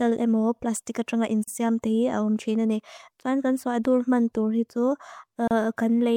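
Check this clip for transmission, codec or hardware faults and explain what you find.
Two short dropouts in the speech: gaps at a join of encoded pieces, at 1.44–1.48 s (about 40 ms) and 5.48–5.51 s (32 ms), four seconds apart. Separately encoded chunks were spliced untrimmed, so encoder delay and padding leave brief silences with codec-smeared edges before the speech resumes.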